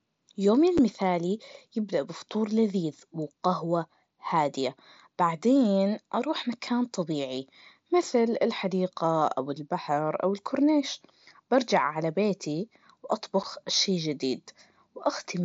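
At 0.78 s and again at 13.43 s there's a quick dropout in the speech, each one a hole of about 7.5 ms, which fits a single lost frame on the headset link. That's unconcealed Bluetooth headset packet loss: a voice packet between headset and phone never arrived, and nothing patched over the gap, so silence or an idle pattern sits there instead. The edges of each hole are abrupt. The light graininess on louder syllables is just the mSBC codec at work.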